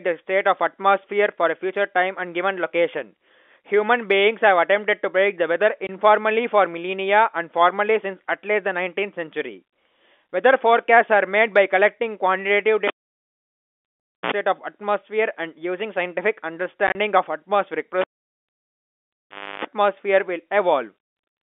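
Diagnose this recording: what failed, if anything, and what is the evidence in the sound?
Network stage: packet loss filled with silence. At 5.87 s a 20 ms hole cuts the speech, which fits two 10 ms packets. From 16.87 to 16.95 s, 50 ms drop out in bursts, the longest 30 ms. The receiver inserted silence, leaving hard edges.

Analogue wiring: a cable pulled and plugged in, twice. A pop at 12.87 s, then near silence for about 1.4 s, a 60 ms burst of 60 Hz buzz as the tip touched, and a second pop at 14.32 s. Again at 18.01 s: about 1.6 s out, 0.31 s of 50 Hz buzz, and a return pop at 19.65 s. The G.711 telephone coding keeps the band at 250 Hz to 3.5 kHz around these events.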